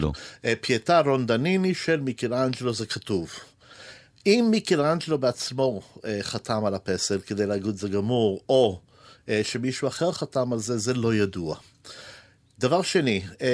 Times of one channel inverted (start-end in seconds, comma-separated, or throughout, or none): none